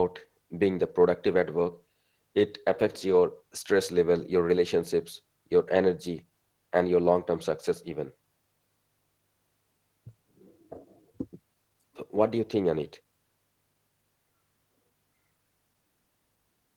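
No technical faults are audible anywhere in the speech.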